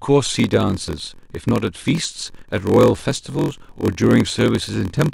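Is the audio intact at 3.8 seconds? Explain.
No. At 3.8 s the audio is inside a block size mismatch (padded) that runs from 0.33 s to the end of the clip. One stage hands over blocks shorter than the next stage reads, which fits a 1024-sample read block, and the shortfall is zero-filled. The speech carries a 43.1 Hz buzz and plays at 0.938 times normal speed with timbre unchanged. A waveform shows brief flat gaps repeating every block, and a spectrogram shows thin vertical gaps at the same spacing.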